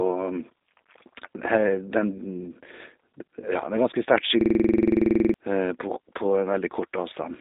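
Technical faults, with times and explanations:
Throughout, G.729 codec: the speech has been squeezed through a low-rate voice codec at 8 kbit/s, which rebuilds each 10 ms frame from a vocal tract filter, a pitch predictor and a handful of pulses rather than the original waveform. The damage is plainly audible as a rough, slightly synthetic texture. Nothing above about 3.8 kHz survives, and the band sits roughly between 250 Hz and 3.7 kHz, so the sound is thin and telephone-like with no air or sibilant detail.
4.41 to 5.34 s, system hang loop: just after "ganske sterkt" the sound locks onto one 46.4 ms fragment and repeats it about 20 times. This is what happens when the machine stalls and the audio hardware keeps replaying its ring buffer. The length fits a 2048-sample buffer. At 21.5 repeats per second the loop comes across as a hard, rapid machine-gun stutter, and roughly a second of real audio is lost behind it.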